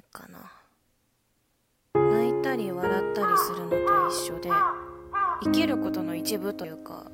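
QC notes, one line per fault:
4.18 s: compressed frames skipped. About one frame of the encoded stream is missing or was rejected by the decoder, so the audio jumps ahead by roughly 30 ms. The frame length of 26.1 ms points to a 1152-sample frame at 44.1 kHz. Overlapping neighbouring frames smear the join into a short blip rather than a hard click.
6.64 s: compressed frames skipped. This time about three frames drop out, a jump of roughly 70 ms. It is heard as a larger jump with the same soft, smeared transition.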